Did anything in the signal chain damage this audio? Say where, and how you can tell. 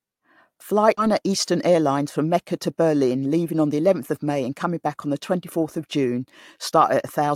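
Yes. In the network path, about 400 ms of speech was dropped at 0.97 to 0.99 s. Playback jumps straight ahead with no gap, so the sound on either side butts together.

The jitter buffer then trimmed about 70 ms of excess delay by cutting pitch periods from 1.07 to 1.99 s. The speech runs about 7% fast at unchanged pitch and sounds hurried.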